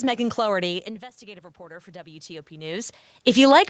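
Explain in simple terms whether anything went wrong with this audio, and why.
From 1.25 s to the end, automatic gain rising takes over: the call's volume control decides the sound has become too quiet and slowly turns itself up. The speech and the room noise behind it swell louder together instead of staying steady.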